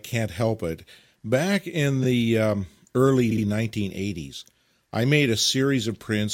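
At 2.03 to 2.05 s, just before "the um early", there are repeated frames. A block of about 21.3 ms plays once more. The decoder was handed the same compressed data twice, and it decoded it faithfully both times. The result is a tiny stutter, and 21.3 ms is added. At 3.31 to 3.44 s, right after "in the um early", a 64 ms block plays twice more. That is a longer stutter, and it adds 128 ms.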